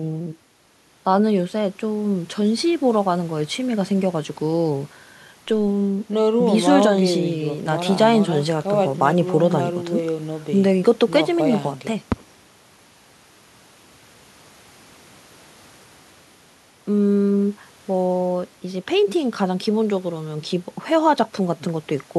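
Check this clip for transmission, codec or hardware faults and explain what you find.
Nothing stood out on listening to this speech recording.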